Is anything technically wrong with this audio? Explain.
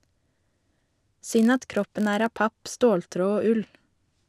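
Yes. From 0.0 to 2.41 s, the speech carries a filter restarted on every block. The filter drops its memory at each block boundary and starts from silence. Each restart leaves a small click, producing a 46.9 Hz buzz that fits a 1024-sample block and rises and falls with the speech level.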